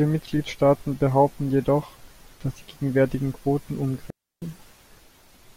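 At 4.10 s the speech cuts to near silence, returning at 4.42 s. This is a digital wireless dropout. The receiver lost too much data and muted for about 320 ms. The hole is clean, with a very short fade and no noise burst on either side.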